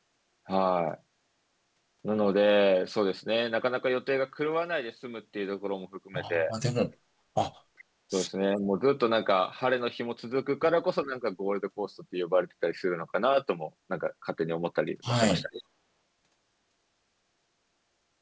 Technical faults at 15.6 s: speech suppressed in double talk; echo leak

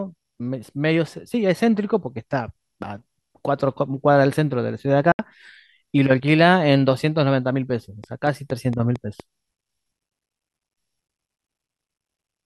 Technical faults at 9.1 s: train of clicks

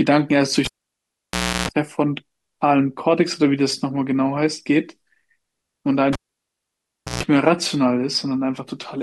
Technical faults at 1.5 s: cable pulled and plugged in

